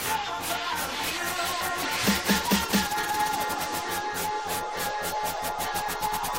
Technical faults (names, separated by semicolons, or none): none